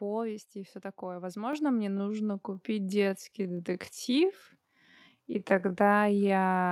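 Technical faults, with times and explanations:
1.53 s: microphone volume stepped up. Right after "и все такое", speech and background noise jump together by about 6 dB in one step, unlike a talker simply getting louder.
1.85 s to the end: time-stretched section. The pace abruptly drops to about 0.68 times normal while pitch holds, so speech drags, likely from software repeating short pieces to lengthen the audio.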